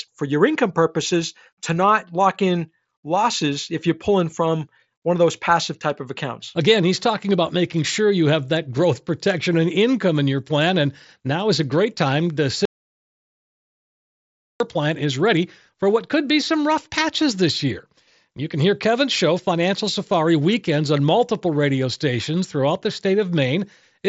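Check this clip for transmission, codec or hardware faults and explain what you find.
One fault stands out: an audio dropout to silence from 12.65 s to 14.60 s, lasting about 1.95 s. The input feeding the recorder was most likely lost, through a broken link or a momentary disconnect, while writing continued with silence. The speech is cut off abruptly and resumes just as suddenly, and the gap between is dead silence with no room tone at all. Whatever was said during those two seconds is missing. The surrounding speech carries the mSBC headset codec's band limit, with nothing above roughly 7.7 kHz.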